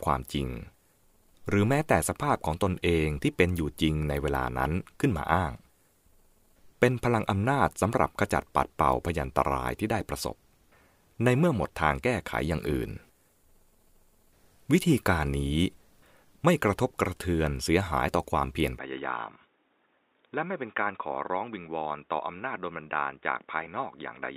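At 18.79 s the speech abruptly turns dull and boxy and stays that way to the end, with no gap at the changeover. Nothing above 3.8 kHz survives, the level drops by a few decibels, and a faint new background noise sits roughly 40 dB under the speech. On a spectrogram the upper band is sharply cut off at that moment, and the waveform steps down slightly. This is likely an input switched to a poorer device, such as a headset's narrowband call profile.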